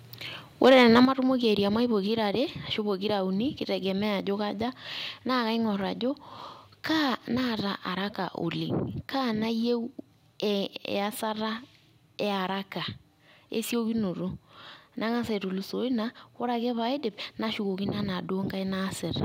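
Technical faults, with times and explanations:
0.62–1.0 s: microphone overload. The loudest syllables have their peaks flattened into a harsh, crackling edge, roughly 5% of samples, likely from input gain about 3 dB past the converter's ceiling. The level itself does not drop.
1.05 s and 2.07 s: microphone volume stepped down. Voice and background fall together in sudden clean steps of about 7 dB, then about 2 dB, likely the call software cutting input gain after the clipping. There is no added distortion.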